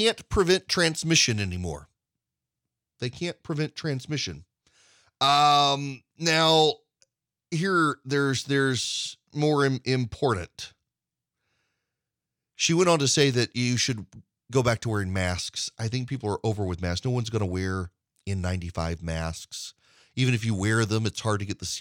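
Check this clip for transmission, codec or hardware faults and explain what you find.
Hard clipping occurs twice in this speech clip, from 6.27 to 6.65 s and from 12.65 to 13.26 s, the second ending just before "that you should". In both stretches the signal runs about 2 dB past what a stage in the chain can pass, so the peaks are sheared flat. Those squared-off tops add high harmonics, heard as a brief crackle and roughness riding on the loudest parts of the speech.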